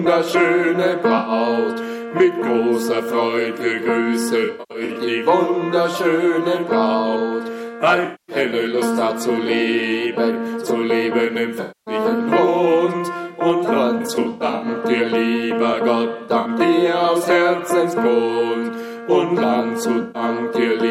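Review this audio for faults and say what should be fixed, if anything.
AAC frame loss with concealment occurs at 1.18, 4.44–4.97, 8.05–8.36, 11.61–11.94, 13.98–14.68, 16.24–16.49 and 20.01–20.22 s. The decoder fills missing frames from the last good spectrum, so these gaps sound smeared, noisy or phasey. On a spectrogram they appear as blurred, frozen-looking patches; at 4.44 and 13.98 s they break into scattered runs. Prevent it with reliable transport, using retransmission or forward error correction for the AAC stream.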